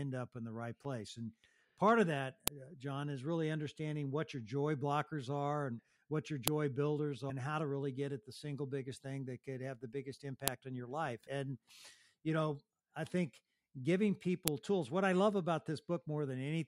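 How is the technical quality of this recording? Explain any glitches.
The recording has one recurring glitch: a file header played as audio. Sharp, loud clicks land at 2.48, 6.48, 10.48 and 14.48 s, every 4 seconds. The speech was joined from 4-second WAV pieces with their header bytes left in. Those bytes play as samples, producing a snap regardless of the speech.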